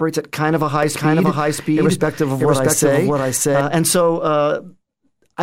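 From 0.83 to 3.61 s, after "at kind of a", a doubled audio track: an equally loud copy trails about 0.7 s behind, likely from a slower second capture path. Unlike echo, it has no decay or room colour and cuts in and out abruptly.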